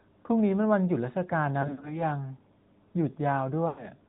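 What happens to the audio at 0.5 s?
At 0.5 s the speech is passing through an AMR narrowband mobile codec, which is active across the whole clip. The signal is sampled at 8 kHz and rebuilt from a vocal-tract model driven by a few pulses per 5 ms subframe, so nothing above 4 kHz survives. The result is muffled, telephone-band speech with a plainly audible buzzy, synthetic edge, consistent with a mid-rate AMR-NB mode around 10 kbps.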